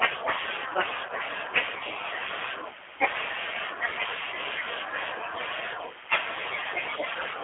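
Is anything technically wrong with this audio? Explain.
Yes. The speech carries two faults.

Throughout, it has the sound of the G.729 codec, plainly audible. The band sits between roughly 300 Hz and 3.4 kHz. The voice is rebuilt from a vocal-tract filter, a pitch predictor and a few pulses per frame, which fits an 8 kbit/s G.729A stream, so it comes out slightly rough and synthetic. A plain band-limited line stays smooth, and wideband codec smearing keeps more top end.

There are also two spots of VoIP packet loss concealed by the speech codec, at 1.07–1.12 s and at 7.13–7.17 s. Each sounds like about 20 ms of missing audio, probably one lost packet. The decoder keeps repeating its last pitch and filter at falling gain, so the sound briefly turns into a buzzy tone or a coloured noise that fades, and the next few frames stay weak. A dropout without concealment would give a click or silence instead.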